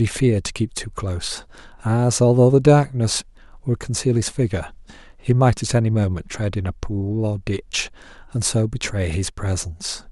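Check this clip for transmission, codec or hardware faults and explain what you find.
One fault: near the end of the speech, from 9.30 to 9.38 s, the level drops abruptly by about 6 dB for roughly 80 ms, then returns. The likely cause is one channel dropping out: with one stereo side lost, the mono sum keeps only half its shared signal. Unlike a full dropout, the sound never goes silent, and unlike a gradual gain change, the step is sudden and sits at about 6 dB.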